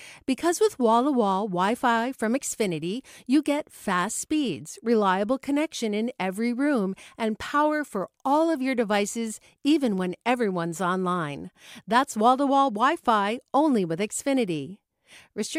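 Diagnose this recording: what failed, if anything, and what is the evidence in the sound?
Nothing failed; no faults heard.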